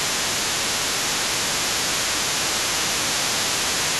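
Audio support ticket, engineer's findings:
Second voice audible under the talker for the whole clip, 0.0 to 4.0 s, sitting roughly 10 dB below the speech. Other side's voice leaking through, likely residual echo: far end played on the loudspeaker, re-captured by the mic, not fully cancelled.

Talker's speech dips in patches at 0.15–1.35 s, 1.84–2.51 s and 3.86 s to end, drops of around 10 dB, nearer 15 dB in the middle stretch. Speech suppressed in double talk, likely the echo canceller attenuating both voices while they overlapped.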